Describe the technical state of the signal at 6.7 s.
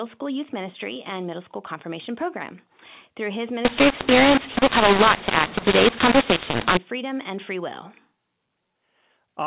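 A mu-law and A-law mixed up fault runs from 3.65 to 6.77 s, so 6.7 s falls near its end. Samples written with A-law are read back as mu-law, scrambling the levels so the speech turns harsh and distorted while quiet stretches fill with noise.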